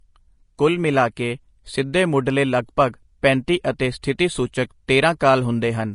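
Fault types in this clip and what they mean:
Vorbis compression: The whole speech clip carries plainly audible codec damage, with nothing above about 10.5 kHz and a grainy, hissy top end where fine treble detail has been replaced by noise of similar energy. This points to a low-rate encode, around 34 kbps, likely from Vorbis. Unlike simple low-pass filtering, which leaves the remaining band clean, here the band that survives is itself roughened and sibilants sound fizzy rather than merely dull.
pre-echo: At 4.02 s a sharp onset is preceded by a brief hiss spread over about 12 ms, so the attack arrives softened and smeared instead of crisp. The transform block holding the onset spread its quantisation noise back into the quiet moment before it. This differs from a click or dropout, which is a single discontinuity. Pre-echo is a noise that leads into the transient and is shaped by it.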